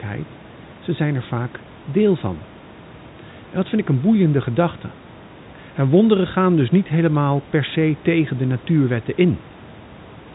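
Listening to the speech in this clip, nothing stood out as a technical fault.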